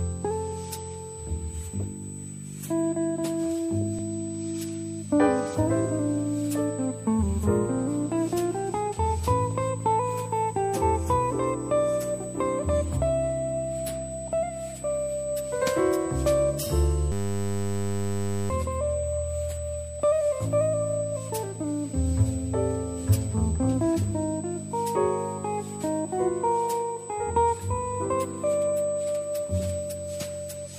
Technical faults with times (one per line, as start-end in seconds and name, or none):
0.00-30.79 USB whine
17.12-18.50 system hang loop